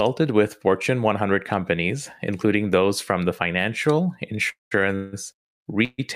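Speech with three call audio freezes: 4.49–4.73 s, right after "those from the financial", then 4.95–5.15 s and 5.85–6.00 s. The last sound is stretched into a fading fill (217, 174 and 137 ms; the first and third decay to silence), then speech resumes intact. This is likely due to delayed packets emptying the jitter buffer.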